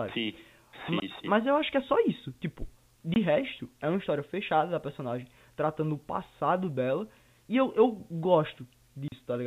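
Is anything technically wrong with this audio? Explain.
Yes. There are three short dropouts from packet loss filled with silence, at 1.00–1.02 s, 3.14–3.16 s and 9.08–9.12 s. The first two last 20 ms each and the last lasts 40 ms, which fits a stream sent in 20 ms packets with one packet lost and then two in a row. The receiver put nothing in their place, so the speech stops abruptly and restarts at hard edges. A concealment scheme would instead smear or repeat the surrounding sound across the gap. The narrow telephone bandwidth that can be heard throughout comes from the G.711 coding and is not part of these holes.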